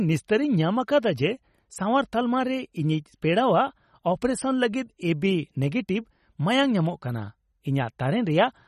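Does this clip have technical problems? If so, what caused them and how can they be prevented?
Yes. The likely cause is MP3 compression at a low bitrate, with damage that fits something near 32 kbps. Short of bits, the encoder throws away the treble and switches weak frequency lines on and off from frame to frame. Throughout the speech nothing sounds above 13.8 kHz, and the sound is plainly watery and swirly, with smeared attacks. Encoding at a much higher bitrate, or keeping a lossless copy, would prevent it.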